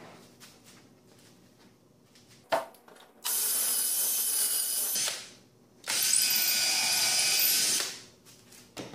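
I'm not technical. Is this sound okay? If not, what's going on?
No. Between 2.44 and 4.95 s there is a section at the wrong speed, likely because that stretch was played against the wrong clock. It runs twice as fast, so it sounds hurried, and its pitch jumps up sharply, by roughly ten semitones.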